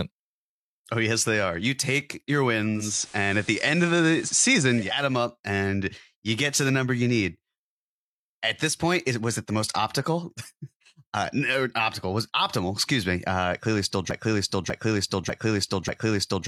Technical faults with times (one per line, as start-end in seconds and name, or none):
2.72-5.01 digital radio blending to analogue
14.11-16.47 broken-record loop